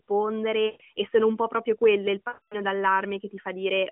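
Lost AMR speech frames occur at 0.66 to 0.82 s and again at 2.28 to 2.56 s. Corrupted frames fail their checksum, so the decoder repeats its last good pitch and vocal tract settings while turning the gain down. The first gap, about 140 ms, fits seven 20 ms frames and gives a drawn-out, fading smear. The longer 240 ms gap, about twelve frames, stretches further and sinks into silence before the speech returns weak or rough through the narrowband phone line.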